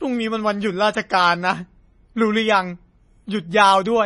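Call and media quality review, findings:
Watery, swirly speech throughout; s sounds chirpy. Nothing above 10.6 kHz. Likely MP3 compression, fits about 32 kbps: treble cut off, weak bands switching per frame.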